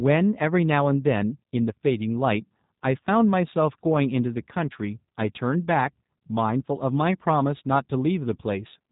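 From start to finish the speech carries plainly audible G.729 codec damage, consistent with an 8 kbit/s G.729A stream. Each frame is rebuilt from a vocal tract filter and sparse pulses, so it sounds rough and synthetic. A spectrogram shows a hard ceiling at 4 kHz, empty above.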